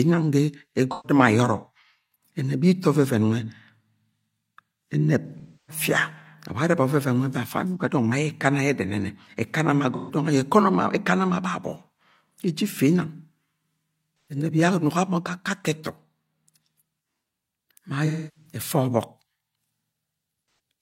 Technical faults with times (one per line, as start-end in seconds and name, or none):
0.91-1.18 AAC frame loss with concealment
5.25-5.83 AAC frame loss with concealment
9.95-10.15 AAC frame loss with concealment
14.21-14.36 AAC frame loss with concealment
18.06-18.59 AAC frame loss with concealment
20.46-20.59 AAC frame loss with concealment